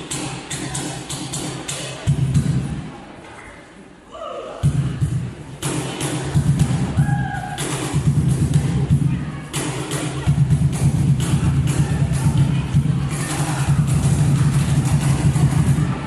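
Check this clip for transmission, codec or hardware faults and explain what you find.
I found no faults to report in this clip.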